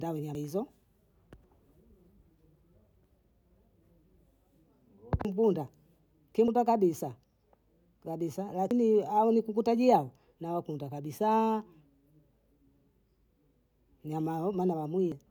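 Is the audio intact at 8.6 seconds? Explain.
No. At 8.62 to 8.71 s compressed frames are skipped: whole frames never reach the output, so the speech jumps ahead by roughly a tenth of a second.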